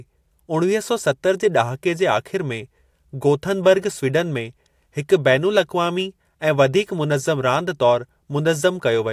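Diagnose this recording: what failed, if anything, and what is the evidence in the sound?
Nothing stood out on listening to this speech recording; no stage in the chain gave any audible sign of trouble.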